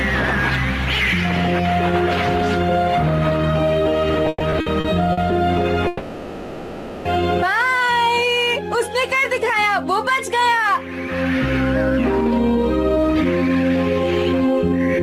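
Between 4.25 and 5.19 s the audio shows repeated stalls (stutter): six short holds, the longest 120 ms, fill 300 ms, about a third of that span. The receiver stretches the last sound each time packets arrive too slowly, so it drags rather than dropping material, unlike packet loss. At 5.87 to 7.07 s a call audio freeze follows: a single continuous 1.18 s hold of continued sound with no silence, likely from packets held up in transit emptying the jitter buffer. It is one long pause, not a string of short ones, and playback resumes exactly where it stopped, now 1.18 s later. From 12.25 to 15.00 s a jitter buffer speed-up drains a backlog of buffered audio by trimming pitch-period-sized slices, roughly 0.3 s in all. The sound runs at 111% speed and feels hurried, yet its pitch stays put, which is what separates it from a resampling error.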